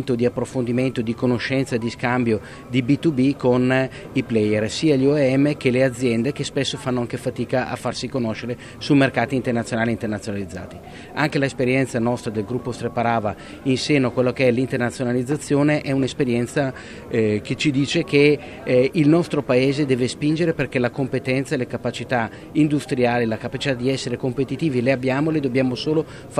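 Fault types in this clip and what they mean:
Drift correction step: from 16.63 to 17.96 s the audio suddenly runs 5.3% slow and sags about 94 cents, nearly a semitone, then snaps back. That's likely clock-matching software changing the playback rate in one jump to rebalance its buffer.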